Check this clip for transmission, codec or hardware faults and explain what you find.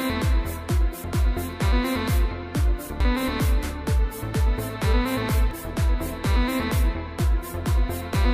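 Four faults of two kinds turn up.

At 1.04 s and 2.90 s, a likely dropped buffer (overrun): samples were overwritten before being read, so the audio skips ahead, losing roughly 30 ms and 10 ms.

At 3.00 s and 5.51 s, damaged data in the compressed stream throws the decoder out of sync while it hunts for the next frame.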